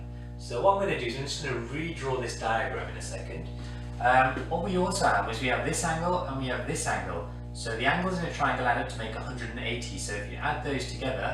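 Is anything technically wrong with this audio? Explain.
Yes. Mains hum runs through the entire clip: a steady low tone at 60 Hz, with a few low harmonics above it, sitting only about 10 dB below the wanted sound, so it is clearly audible. A ground loop or a nearby transformer has coupled the power line into the signal path. Unlike handling noise or wind rumble, which are broadband and fluctuate, this hum holds one fixed pitch at a constant level whether the sound is active or quiet.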